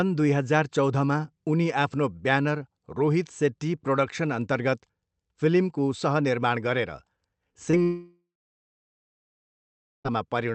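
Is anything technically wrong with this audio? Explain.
Yes, the speech breaks up near the end, heard through a call codec whose content stops at about 8 kHz.

Short concealed packet loss occurs at 7.53–7.57 s and again at 7.71–7.75 s. Each time a few hundredths of a second failed to arrive, so the decoder extended the preceding sound and blended back. You hear a brief smear or wobble. On a spectrogram it shows as a short stretch of continued sound with a slight seam at each edge.

A long network dropout, likely, runs from 7.83 to 10.07 s. The receiver first continues the last sound as a fading buzz or hiss for roughly four tenths of a second, then leaves about 1.8 s of silence before speech resumes with that portion missing. The waveform flattens to near zero, and the spectrogram goes blank across the silent stretch.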